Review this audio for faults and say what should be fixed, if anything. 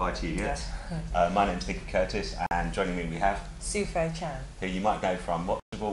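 Bluetooth stalls at 2.46 to 2.51 s and 5.60 to 5.73 s: the sound drops to silence for about 47 ms, then 128 ms, and resumes. The likely cause is radio interference delaying packets until the headphones' buffer emptied and playback paused. Keep the phone close to the headphones, clear of other 2.4 GHz traffic, or use a larger receive buffer.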